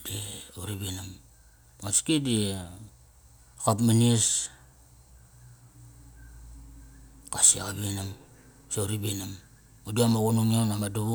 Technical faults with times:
none

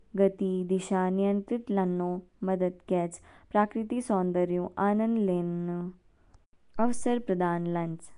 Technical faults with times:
0.00-8.17 Nellymoser compression

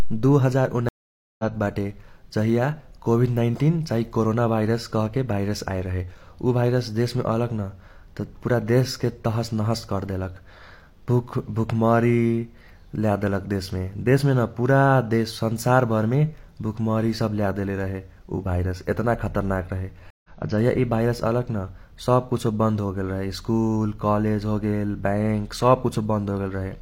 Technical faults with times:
0.89-1.44 stream reconnect
20.10-20.29 stream reconnect

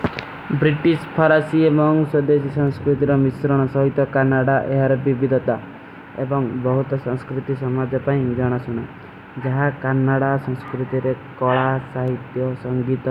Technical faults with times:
2.68 dropped samples
10.68 dropped samples
12.08 dropped samples

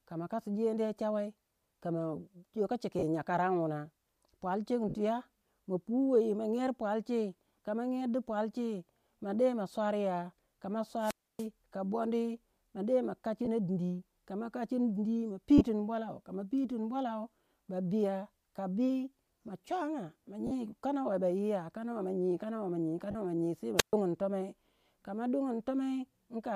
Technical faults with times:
2.99-3.04 lost LE Audio frames
4.89-4.94 lost LE Audio frames
10.99-11.48 wireless microphone squelch dropout
13.45-13.48 lost LE Audio frames
15.58-15.61 lost LE Audio frames
20.47-20.52 lost LE Audio frames
23.11-23.15 lost LE Audio frames
23.77-23.93 wireless microphone squelch dropout

